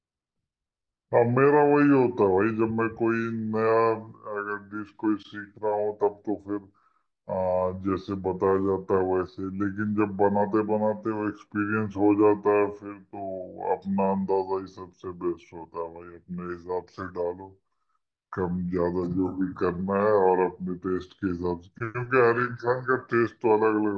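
Speech, and the whole thing has a wrong sample rate problem: everything runs slow and sits low, at roughly 0.69 times normal speed and about 6.5 semitones flat, with speed and pitch dropping together. That's the signature of samples being played at a lower rate than they were captured at with no conversion in between. The ratio fits audio recorded at 32 kHz and played back at 22 kHz.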